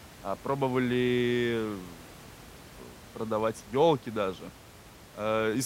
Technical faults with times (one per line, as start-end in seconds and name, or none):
none